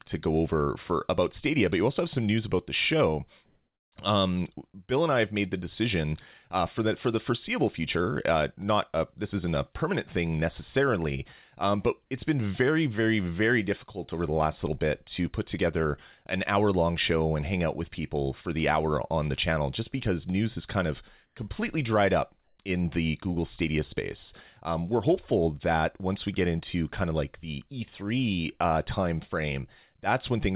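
At 3.46–3.92, 21.26–21.36 and 22.44–22.58 s, comfort noise replaces the background. The sender likely stopped transmitting during pauses, so a featureless hiss fills them, showing as flat, uniform spectrogram texture.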